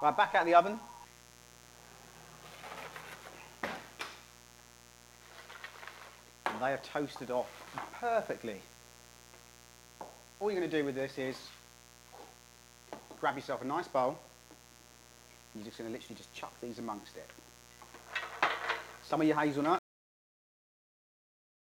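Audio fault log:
throughout mains buzz. A steady, raspy buzz sits under the sound, roughly 25 dB below it. Its fundamental is 60 Hz. Sharp switching spikes, twice per mains cycle, spread harmonics far up the spectrum. That is why it rasps instead of humming.
19.79 s cut-off end. The sound stops dead mid-event and falls straight to digital silence. There is no decay or tail. The final buffers were never written or played out, so the signal simply ends and the remaining time stays empty.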